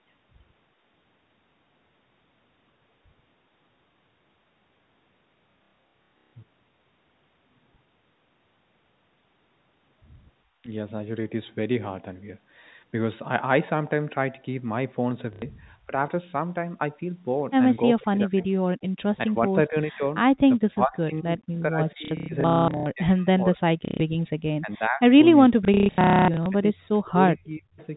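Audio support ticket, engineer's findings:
Packet loss with last packet repeated at 5.54–6.33, 15.33–15.42, 22.05–22.86, 23.85–24.0 and 25.65–26.46 s. Robotic stutter, buzzing on longer runs (up to 270 ms). Jitter buffer likely replaying the last frame. Gaps fit 30 ms packets.

Speech suppressed in double talk: brief dips of about 10 dB at 10.63 and 15.87 s, then heavy patchy ducking across 18.0–27.8 s, roughly 4 s in total, down about 40 dB at worst. Likely the echo canceller clamping both talkers during overlap.

Echo leak: faint delayed copy of the audio at 18.41–19.18 s, lagging about 423 ms at roughly 30 dB down, plus a short scrap at 27.8 s, about 435 ms late. Residual echo likely slipping past the far-end canceller on a loudspeaker setup.

Background gated by the echo canceller at 18.9 s: room tone drops out for about 100 ms, roughly 40 dB deep, then comes back. Canceller slamming the mic down while the loudspeaker was active, then releasing.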